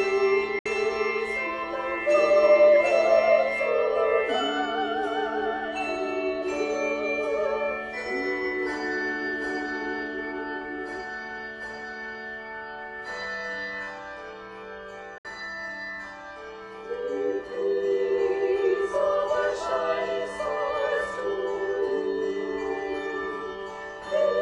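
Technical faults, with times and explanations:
Throughout: sample clock jitter. The converter's clock wanders by roughly half a microsecond, so each sample lands slightly off time. The timing error is largest where the waveform changes fastest, leaving a faint hiss or roughness around 50 dB below the sound that swells on loud, bright passages and disappears in silence.
0.59 s and 15.18 s: digital broadcast dropout. At each point the sound fades out over about 3 ms and stays silent for about 70 ms before returning. The receiver muted after losing the signal, which fits two corrupted frames of roughly 64 ms, and whatever was transmitted during those gaps is gone.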